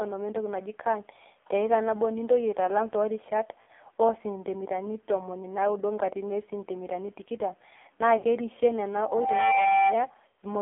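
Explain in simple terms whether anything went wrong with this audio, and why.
AMR narrowband mobile codec, throughout the whole clip: the speech went through an old-style mobile phone codec. It keeps only the middle of the voice, roughly 300 Hz to 3.5 kHz, and rebuilds each short slice from a simple model of the mouth and throat using very few pulses. At this low setting the damage is heavy, so the speech sounds thin, muffled and buzzy, a bit robotic.

Lost AMR speech frames, at 3.62 to 3.71 s, 8.18 to 8.25 s and 10.28 to 10.38 s: radio errors broke small pieces of the signal. Each time, the decoder stretched the last good sound while fading it. The first two gaps last about 60 ms, which fits three lost 20 ms frames. The last lasts about 100 ms, roughly five frames. You hear a brief smeared warble or dip, then speech returns weak or rough for a moment.

Loudspeaker feedback squeal, from 9.00 to 10.00 s: a microphone picked up the loudspeaker it was feeding, and the loop kept boosting one pitch, a tone near 779 Hz. 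That tone grows over just under half a second into a steady whistle that ends up a little louder than the speech. It lasts a full second before it stops.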